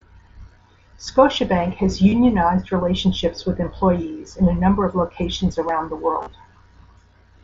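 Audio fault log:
2.09–2.12 s and 6.21–6.27 s, concealed Bluetooth headset packet loss: the receiver papers over about 30 ms of missing audio before "relationships with employees in", then 45 ms spread over 60 ms after "of locations around the" by repeating recent waveform, giving brief buzzy patches and a slight warble on recovery.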